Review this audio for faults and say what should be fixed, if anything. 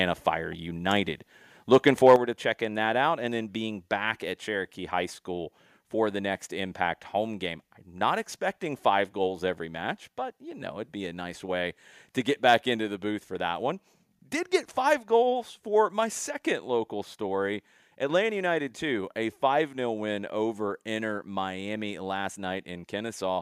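From 1.74 to 2.14 s, just before "to checking that out", the loudest peaks sound harsh and crackly. This is microphone overload, likely from input gain set too high. Peaks exceed the converter's ceiling by about 3 dB, and their tops are flattened. A second, shorter burst comes at 12.5 s, after "nice way to get", about 1 dB over. Lowering the microphone input level before recording would prevent it.

At 2.16 s, right after the first overload and before "to checking that out", the voice and background both drop suddenly by about 6 dB. This is the microphone volume being stepped down, likely by call software reacting to the clipping. Turning off automatic gain adjustment and setting a safe level manually would prevent it.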